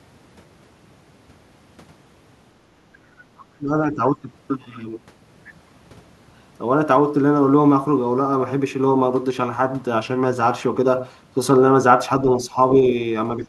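Other side's voice leaking through appears from 3.38 to 3.43 s: a brief, very faint scrap of a second voice, roughly 30 dB below the main speech, surfaces for a moment. The likely cause is a loudspeaker on the talker's end playing the far party's audio back into the microphone, with the echo canceller leaving a small residue uncancelled. Because it is so short and quiet, it registers as a faint ghost.

Speech suppressed in double talk follows at 3.58 to 3.72 s and 3.91 to 4.27 s, and again at 13.37 to 13.47 s, right at the end. In each, the main talker's level sags, by around 15 dB at its deepest in the first dip and around 10 dB in the others. The drops last a fraction of a second each. This is likely the echo canceller facing both sides at once: unable to separate its own talker from the loudspeaker echo, it turned the whole signal down.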